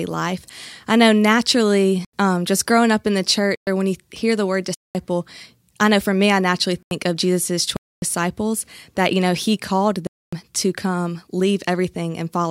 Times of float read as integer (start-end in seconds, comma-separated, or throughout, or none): none